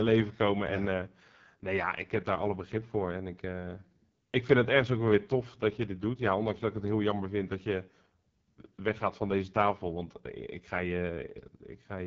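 From start to finish the speech carries the AMR wideband (HD Voice) codec at its roughest: a coarse, raspy grain, which fits the lowest 6.6 kbit/s mode. Nothing sits above roughly 7.4 kHz, and the top band sounds like hiss rather than real detail.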